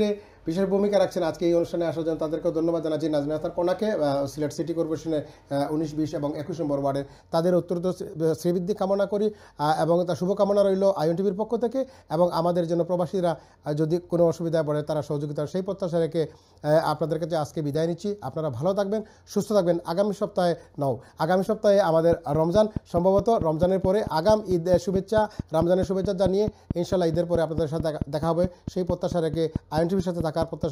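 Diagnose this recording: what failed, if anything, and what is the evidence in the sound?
From 22.13 s to 30.65 s, a train of clicks runs over the sound at a steady 4.6 per second, around forty near-identical pulses peaking roughly 10 dB above the programme and continuing through quiet passages. The evenly spaced, same-shaped ticks point to a repeating external pulse, likely interference coupling into the analogue wiring from nearby equipment. Random vinyl-style crackle or buffer dropouts would be uneven in timing and shape, or would leave gaps rather than add pulses.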